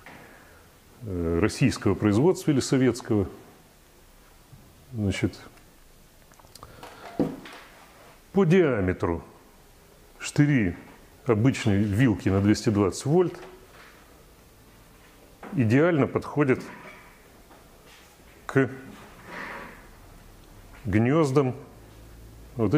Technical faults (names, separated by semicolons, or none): none